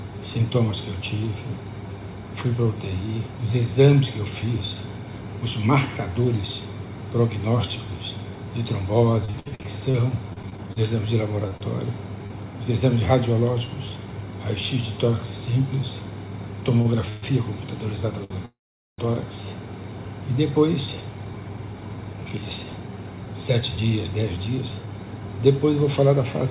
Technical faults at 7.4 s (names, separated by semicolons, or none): none